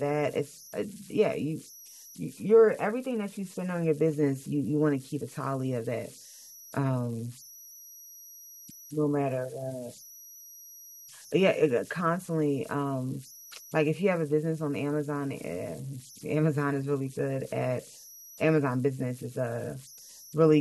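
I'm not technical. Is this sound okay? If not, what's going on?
No. Throughout the recording there are converter idle tones: a high whistle, somewhere around 5 kHz, most noticeable in the pauses between phrases, with a grainy hiss under the quieter parts of the speech. The device turning sound into digital data falls into a repeating pattern when the input is very quiet. Unlike electrical hum, which is a low steady buzz, this is high-pitched and shows up mainly where the sound goes quiet.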